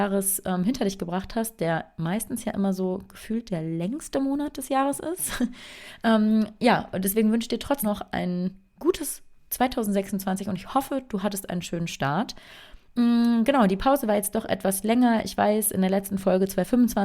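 At 7.82 s the sound jumps abruptly forward, losing about a fifth of a second with no gap: a skip ahead, where a stretch of audio was dropped while later audio was already waiting. From 7.91 to 8.89 s it runs about 5% fast at unchanged pitch, a jitter buffer speed-up trimming pitch-period slices, roughly 50 ms in total, to shrink excess delay.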